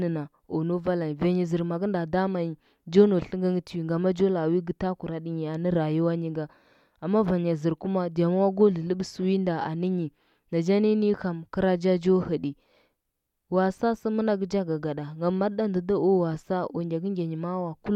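Nothing in the recording stood out as a technical problem on listening.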